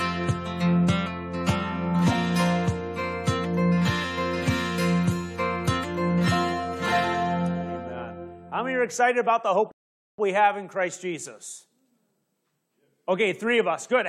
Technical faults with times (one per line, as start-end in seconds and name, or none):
9.71-10.18 rebuffering stall